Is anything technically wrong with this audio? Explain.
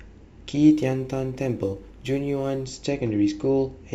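Yes, there's a stretch of crude rate conversion from about 0.72 s to 2.65 s. The samples there were resampled by simply repeating the nearest one instead of filtering properly, which fits a jump from 44.1 kHz to 48 kHz. That repeating pattern throws up shifted, inharmonic copies of the speech, sitting roughly 35 dB below it. You hear it as a gritty fizz riding on the louder and brighter parts of the speech.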